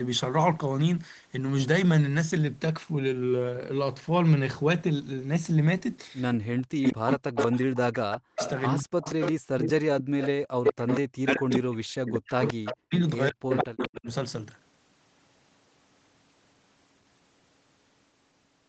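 From 6.35 to 8.92 s, speech is suppressed in double talk. The level drops by about 40 dB in places, cutting out for roughly two seconds in total. The likely cause is an echo canceller muting this talker while the far side spoke.

An echo leak starts at 6.83 s and runs to 11.54 s. A copy of the voice returns 189 ms late, only about 5 dB below the speech. This is likely loudspeaker pickup the canceller missed.

Suppression dips briefly again from 9.92 to 10.2 s. It then returns from 11.01 to 14.07 s, with about 2 seconds lost. Echo leaks through again from 12.41 to 12.73 s and 13.49 to 14.14 s, at the same 189 ms delay.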